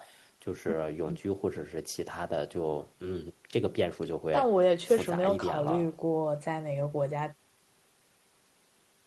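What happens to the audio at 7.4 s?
Nothing goes wrong at 7.4 s; the speech there passes intact through the call path, with only the band-limited coding character it carries throughout.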